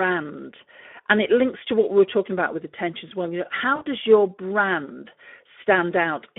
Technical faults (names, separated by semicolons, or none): Speex codec; VoIP packet loss concealed by the speech codec